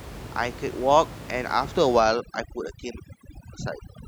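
Speech, with room noise sitting about 15 dB below the voice. From 2.00 s to the end, overdone noise removal strips bands near the noise floor, dropping the background into twinkling, warbling specks.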